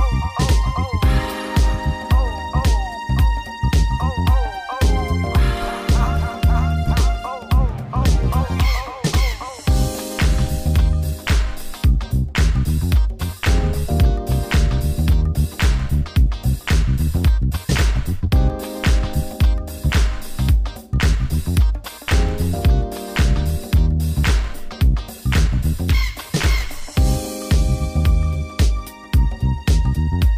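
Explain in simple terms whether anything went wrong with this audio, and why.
Nothing went wrong with this audio that a listener can hear. There is no moment where the sound breaks, jumps or changes in a way that points to a technical problem.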